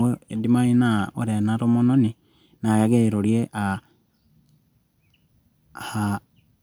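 Nothing technical goes wrong anywhere in this speech recording, so there's no fault to describe at any point.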